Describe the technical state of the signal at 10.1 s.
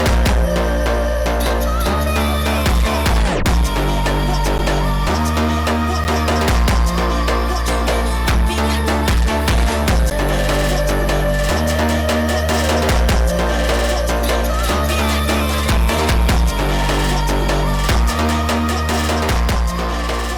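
At 10.1 s there's a block of digital silence, about 10 ms long. The output briefly gets zeros instead of audio, either because the program didn't fill its buffer in time or because a calculation produced invalid numbers. The audio drops out and comes straight back with no fade. At that length you don't hear a real gap, just a quick tick or dip in the sound.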